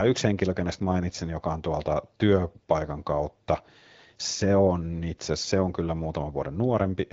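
No technical faults are audible in this speech.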